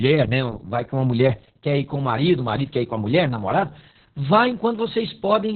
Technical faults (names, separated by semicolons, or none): Opus voice compression